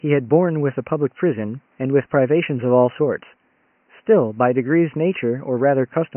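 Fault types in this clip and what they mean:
No faults found in this speech clip; the room noise sits about 45 dB below the speech.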